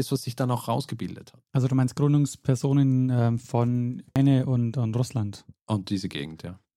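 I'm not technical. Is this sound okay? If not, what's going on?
No, at about 4.16 s there's a quick glitch from damaged data in a compressed stream: a corrupted bit of the file briefly trips up the player.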